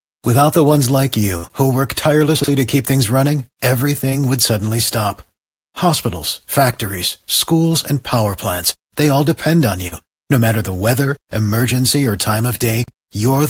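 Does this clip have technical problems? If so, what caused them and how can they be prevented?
Yes. At 1.37 to 1.45 s there is a burst of packet loss: several consecutive packets never arrived, so the receiver stretched and faded the last sound for about 60 ms, then resumed with roughly 60 ms of audio skipped. A larger jitter buffer with forward error correction would prevent it.

At 2.40 to 2.48 s, between "who work" and "to keep things running", and again at 12.84 to 12.92 s, after "weather emergency or time", chunks play out of order: a 40 ms chunk was written one chunk late, causing a jumbled moment. Sequence-checking chunks before playback or writing would prevent it.

At 9.88 to 9.93 s, just after "they all depend on", short concealed packet loss occurs: about 40 ms never reached the decoder, so it synthesised a continuation and blended back in, leaving a brief smear. Better network stability and redundancy would prevent it.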